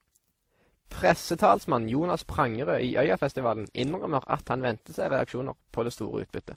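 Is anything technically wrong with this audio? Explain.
Yes. Throughout the speech the sound carries two distinct sets of lossy-coding artefacts, most likely from transcoding between lossy codecs: a low-rate encode, consistent with Opus around 16 kbit/s, re-encoded with WMA 1 near 64 kbit/s, which spends bits on the earlier artefacts while adding its own. Content extends only to about 20 kHz.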